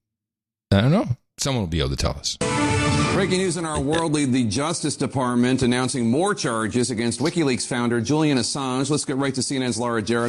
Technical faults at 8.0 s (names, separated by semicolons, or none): none